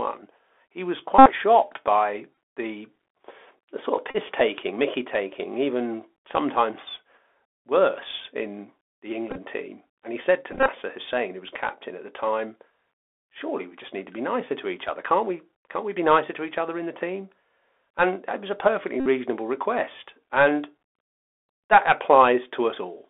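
Speech carried through a Bluetooth CVSD headset codec, which confines it to about 300 Hz to 3.5 kHz with granular hiss, scratchy sibilants and an empty spectrogram above the band. A Bluetooth headset packet repeated problem causes short, buzzy stutters near 267 Hz at 1.19–1.31 s (between "he was" and "shocked by the"), 2.35–2.37 s, 4.11–4.17 s (after "the sort of"), 9.31–9.38 s, 10.52–10.68 s and 19.00–19.07 s. On the waveform these appear as a repeating 3.75 ms pattern. From 11.97 to 14.01 s, between "who was captain" and "to be nicer to", a loudspeaker feedback squeal at 5.9 kHz builds over about 0.3 s to about 15 dB above the speech, drawn as a bright horizontal line.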